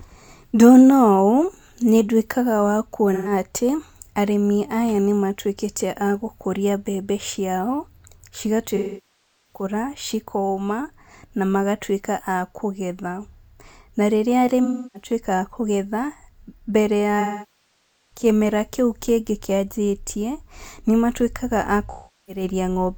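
AAC frame loss with concealment breaks the speech five times: 3.13–3.32 s, between "nĩndwĩkaga wa" and "atĩ arĩmi aya nĩmatwĩkĩte"; 8.76–9.63 s; 14.64–15.10 s; 17.20–18.25 s; and 21.91–22.43 s, after "kĩanjĩtie nĩmatwĩkaga a". Missing frames are rebuilt from the last good spectrum, so short gaps sound smeared and noisy, while the longer ones sag toward silence and fade back in, unlike a hard dropout's abrupt cut.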